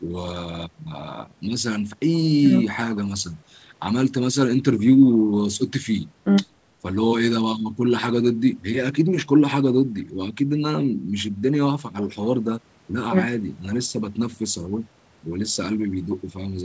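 No technical faults can be heard in the speech; the lowest bass is trimmed and nothing is present above 8 kHz, which fits a call path with normal microphone processing and a wideband codec such as G.722 at 64 kbps.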